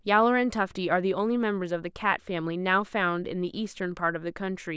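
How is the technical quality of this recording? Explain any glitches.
No glitches can be heard anywhere in this recording.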